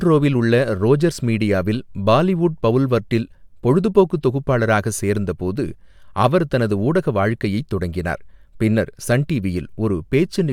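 No technical faults can be heard in this recording.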